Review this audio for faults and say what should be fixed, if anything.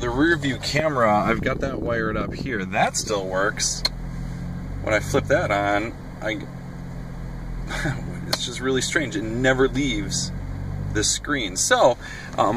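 Loud pops at 0.79–0.82 s and 5.19–5.21 s, roughly 15 dB and 10 dB above the sound, likely voltage pulses from a plug, switch or static discharge. Secure connectors and mute the signal chain before switching anything.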